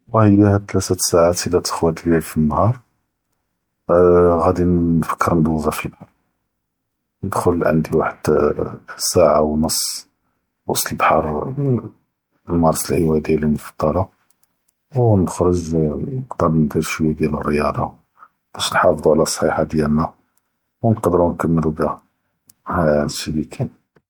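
The speech was likely passed through an MP3 encoder several times, roughly three generations at a setting that fits 96 kbit/s, which is generation loss. Quantisation noise and spectral gaps build up across the whole clip, leaving it swirly, hollow and smeared, with softened attacks and nothing above 20.1 kHz.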